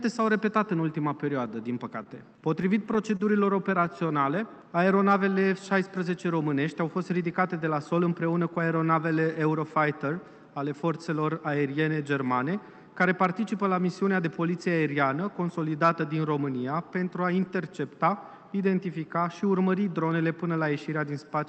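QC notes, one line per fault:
2.03–3.21 s, scattered short gaps: about seven tiny holes, the longest around 30 ms, each patched by carrying the last sound forward, so you hear little ticks and smears.
3.80–5.35 s, jitter buffer slow-down: the receiver repeated single pitch periods to rebuild its reserve, adding 103 ms. The sound runs at 94% speed at unchanged pitch and feels drawn out.
7.54–8.10 s, jitter buffer speed-up: too much audio was queued, so the receiver snipped out short pitch-period slices, roughly 70 ms in all. The result plays at 110% speed at the same pitch and sounds hurried.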